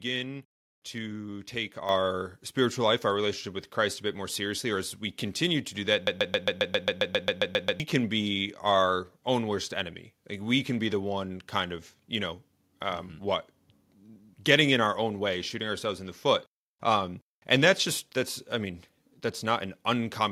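At 1.89 s, after "to take", the microphone volume steps up by about 6 dB at once, so the speech and background both jump louder together.

From 6.07 to 7.80 s, after "continue to do that", a broken-record loop repeats a 0.13 s fragment 13 times, likely from a stalled stream; the speech in that span is lost, and it resumes at "can be our own".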